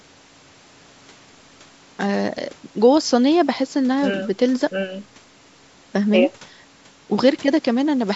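Nothing here counts as a fault: the speech has simply been through a call's microphone processing, which trims away the lowest bass and leaves nothing above about 8 kHz, exactly as that kind of path normally does.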